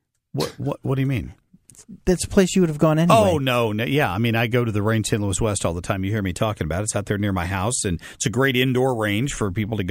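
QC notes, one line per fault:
Throughout, crude rate conversion. The speech carries a gritty, inharmonic fizz that rides on louder and brighter sounds. The pattern points to a 32 kHz source raised to 48 kHz by simply repeating the nearest sample, with no filtering. That 2-to-3 step repeats a fixed pattern of doubled samples. It creates tones unrelated to the voice, sitting around 20 dB below it, loud enough to hear.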